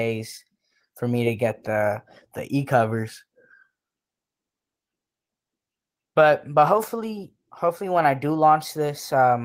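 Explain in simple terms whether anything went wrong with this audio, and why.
Nothing went wrong with this recording that a listener would pick up on. The speech comes through steadily with no dropouts, glitches or sudden changes along the way.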